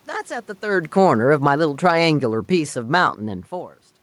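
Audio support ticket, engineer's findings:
AGC backing off, 0.65–3.1 s: automatic gain falling after input or background noise read as too strong, gain lowered gradually by about 7 dB. Speech starts loud, then sinks steadily, room noise sinking with it. Level shifts near 0.5 s and 3.5 s are the talker moving, not a system fault.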